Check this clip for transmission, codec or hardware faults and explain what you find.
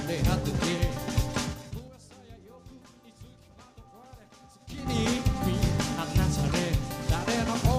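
There's one fault here, zipper noise, and it shows up twice. From 1.45 to 1.96 s the level drops by roughly 25 dB in 4 dB jumps, and from 4.61 to 4.95 s it climbs by about the same amount in 6 dB jumps. Both moves step about ten times a second with no smoothing between steps, so each jump leaves a small click and you hear a ticking zip riding on the sound while the level moves.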